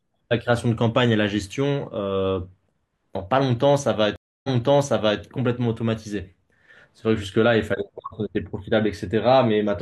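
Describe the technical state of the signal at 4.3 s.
At 4.3 s the signal sits inside a stream reconnect, which runs from 4.16 to 5.21 s. The connection dropped, and the player went silent for 280 ms. It then reconnected and started a fresh decoder mid-stream. The server resent a burst, so the audio resumes about 0.77 s earlier than where it stopped. That span of speech is heard twice. The first frame after the gap fades in.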